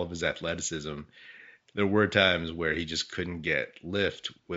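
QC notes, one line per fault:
No faults were found in the clip. A low room noise sits about 49 dB below the speech.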